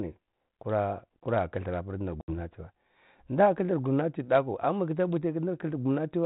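Speech carried over G.726 ADPCM at 32 kbit/s, so nothing above 4 kHz passes. Packet loss on the ADPCM call strikes from 2.21 to 2.41 s. About 70 ms falls to hard-edged silence, roughly seven packets. The decoder's predictor then disagrees with the sender's. The speech returns briefly distorted before settling.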